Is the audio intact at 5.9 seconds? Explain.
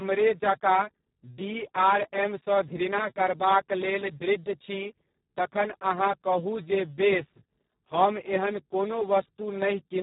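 No. At 5.9 s, as across the whole clip, Speex codec damage is heavy. The speech sounds hoarse and noisy, which fits a very low bitrate of about 4 kbps, with too few bits for the excitation. Nothing is heard above 3.8 kHz.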